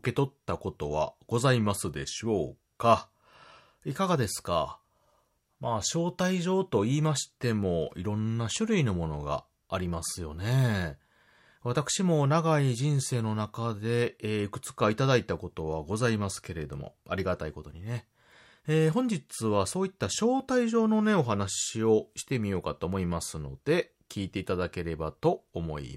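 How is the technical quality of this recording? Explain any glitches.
No glitches or technical faults can be heard anywhere in the speech recording.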